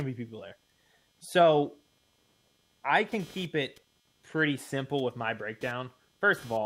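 Computer activity noise runs throughout the speech. A faint buzz pulses around 200 times a second. Computer load changes are shifting the shared audio ground.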